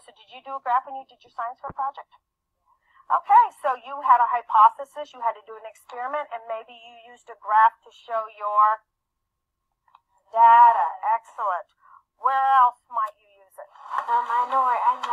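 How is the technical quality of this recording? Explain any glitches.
The recording has one clear glitch, a call bitrate drop from 1.69 s to 10.95 s. The call's bandwidth estimate fell, so the encoder coded more coarsely and discarded high frequencies. The sound turns muffled and watery, at its worst for about 5 s, which fits a fall from roughly 128 kbps to around 19 kbps. Unlike packet loss, there are no gaps or stutters, and the sound recovers.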